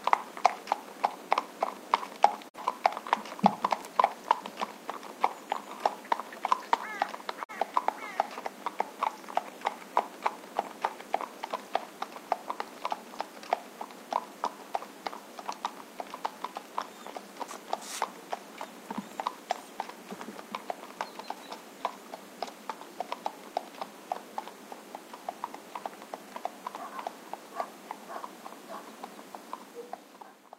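At 2.48 to 2.58 s and again at 7.43 to 7.54 s there's a digital broadcast dropout: a corrupted frame, about 43 ms of audio, gets muted, so the sound fades out over 20 ms into a brief hole.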